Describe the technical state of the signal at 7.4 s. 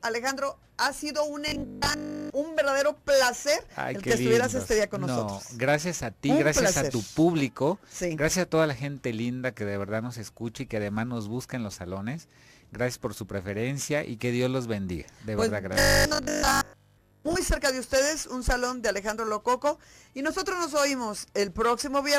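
At 7.4 s the signal is intact, with no audible fault at that point.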